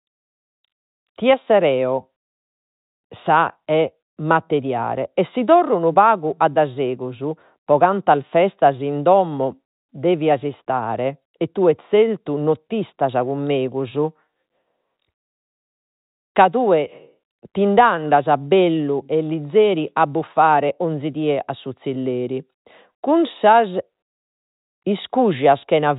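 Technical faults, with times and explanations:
Nothing technically wrong turns up in this speech clip, and the narrow telephone sound is simply the G.711 line coding doing its ordinary job of cutting everything above 4 kHz.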